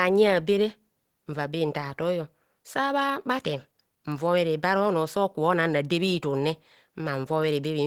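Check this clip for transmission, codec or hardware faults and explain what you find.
One fault runs through the whole clip: Opus compression. The speech sounds muffled, hoarse and grainy, with the damage plainly audible despite content reaching 20.2 kHz. That points to Opus at a low rate near 16 kbps in its hybrid speech mode, synthesising the upper bands rather than coding them in detail, which is the likely cause.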